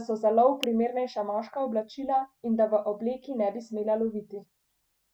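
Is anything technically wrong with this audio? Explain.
Yes, there's one glitch. At 0.63 s an electrical switching spike cuts in, a sharp snap reaching roughly -10 dBFS over the speech, likely a nearby switch arcing into the audio line.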